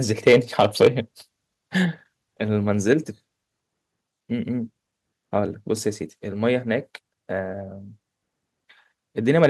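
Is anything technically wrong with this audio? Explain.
Yes. From 0.27 to 0.88 s, 2.92 to 2.94 s, and 9.29 s to the end, the loudest syllables take on a harsh, crackling edge. This is likely microphone overload: the input runs up to about 6 dB, 1 dB and 3 dB past the converter's limit, flattening the tops of the peaks.

At 0.87 s and 2.88 s, the voice and the background drop abruptly, by about 3 dB and then about 2 dB. This is likely the microphone volume being stepped down, as the call software cuts the input gain in one step after detecting the input as too loud or clipping.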